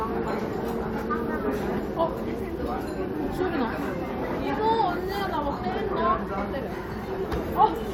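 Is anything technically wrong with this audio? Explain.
No, nothing is technically wrong with this audio.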